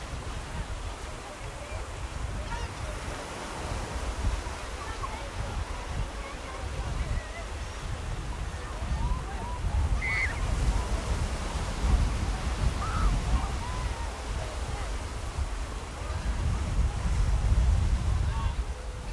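No technical faults can be heard anywhere in the recording.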